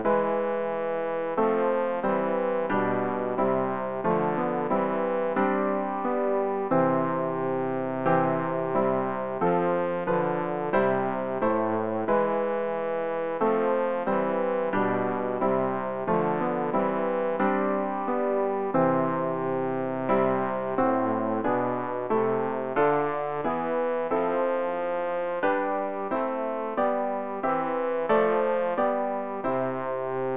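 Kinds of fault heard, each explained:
No dropouts, clipping, distortion, noise bursts or other technical faults can be heard anywhere in the signal.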